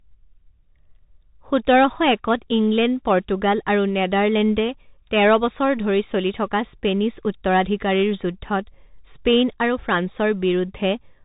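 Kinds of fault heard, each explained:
Bluetooth CVSD headset codec: The speech is boxed in and narrowband, with nothing above about 3.8 kHz, so s sounds come out scratchy and a grainy hiss sits beneath the voice throughout. Louder, brighter moments smear into distortion. This is the headset codec coding each sample as a single up-or-down bit with an adapting step, which fits a 64 kbps link; fast high-frequency swings outrun the step size, and the damage is plainly audible.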